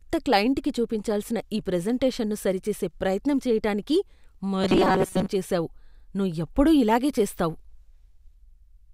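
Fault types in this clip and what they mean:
Robotic sound from repeated short buffers: The speech becomes a rigid metallic buzz near 188 Hz from 4.62 to 5.28 s, just before "చేసావు నువ్వు ఎప్పుడూ ఇలాగే". Most of that stretch is repeated. It is likely a roughly 5 ms chunk looped while fresh audio was late.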